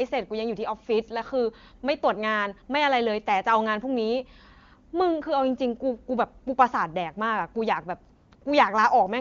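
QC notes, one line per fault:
8.15 to 8.31 s, 8.35 to 8.41 s and 8.43 to 8.45 s, AMR comfort noise: the sending phone judged these gaps silent and stopped transmitting speech frames for 160 ms, 60 ms and 20 ms, so the receiver filled each with synthetic noise built from a rough level and spectrum estimate. The real background drops out and a smooth, even hiss switches in and out in quick succession, against clean wideband coding consistent with the highest AMR-WB rate.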